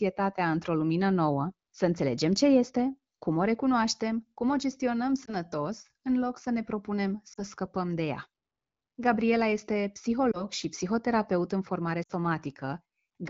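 Right after "recunoaștem cum o gestionăm", around 5.26 to 5.34 s, there's a short warble that sounds like one lost 20 ms frame. Similar lost AMR speech frames show up at 7.33 to 7.41 s, at 10.31 to 10.45 s just before "și psihoterapeut în formare", and at 12.04 to 12.12 s right after that phrase. The 12.04 s one is longest, about three frames' worth. Radio errors spoiled those frames, so the wideband decoder stretched the last good sound with dropping gain, and the voice comes back a bit rough each time.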